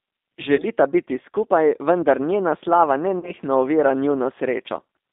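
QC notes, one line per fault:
Throughout: G.729 codec, plainly audible damage; the 8 kbit/s pulse-based rebuild and a 250 Hz to 3.7 kHz line band leave speech thin, rough and faintly synthetic.
0.56 to 0.64 s and 3.19 to 3.33 s: VoIP packet loss concealed by the speech codec. Roughly 20 ms, then 40 ms, goes missing, the second gap just after "skupaj vendar njena slava" and the first just before "biti skupaj vendar njena". The decoder extends its last pitch and filter at falling gain, so a fading buzzy tone or coloured noise fills each gap and the voice stays weak briefly after.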